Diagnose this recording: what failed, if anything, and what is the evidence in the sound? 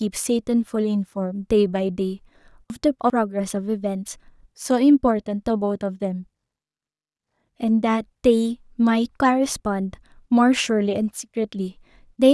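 Chunks out of order at the buffer stage: from 2.7 to 3.1 s the speech jumbles across three hard joins, as one 100 ms chunk plays three chunks late.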